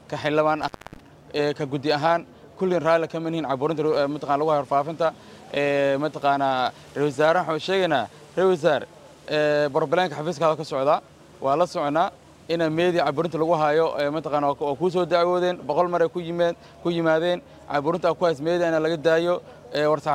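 From 0.61 to 1.00 s the sound crackles and drops out for about 284 ms, leaving faint hiss: an intermittent contact, a loose cable or plug briefly opening the line.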